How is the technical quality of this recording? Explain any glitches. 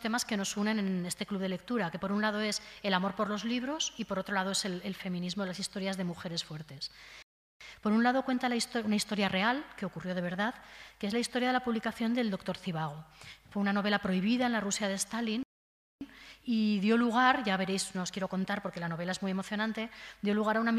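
Two glitches stand out, both playback stalls. The first runs from 7.22 to 7.61 s, about 0.38 s. The second runs from 15.43 to 16.01 s, about 0.58 s. Each time the sound cuts to silence mid-flow, then resumes. The player likely ran short of data or was briefly blocked.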